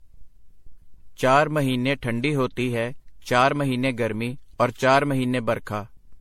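Throughout the speech the sound is swirly, smeared and hollow, with blurred attacks and nothing above 16.5 kHz. This is likely generation loss, with about ten rounds of lossy re-encoding consistent with 64 kbit/s MP3, each pass adding fresh quantisation noise and spectral holes.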